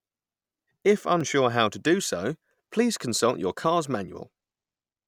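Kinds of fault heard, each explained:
Audio missing between chunks at 1.21 s and 3.20 s: tiny skips of a few milliseconds, just before "how to do so" and between "to do so please" and "your car's", likely from 2-second chunked processing dropping a sliver at each handover and splicing the edges.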